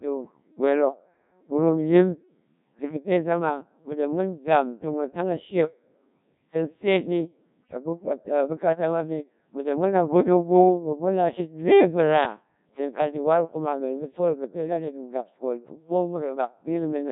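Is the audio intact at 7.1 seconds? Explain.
No. At 7.1 seconds the speech sounds robotic and buzzy, with a synthetic quality that runs through the entire clip rather than just this moment. This is Codec 2 vocoder damage, and the heavy degradation fits a very low rate of about 1.3 kbit/s. The codec discards the actual waveform and transmits only pitch, voicing, energy and a rough spectral envelope, and the decoder then rebuilds the voice from sine waves.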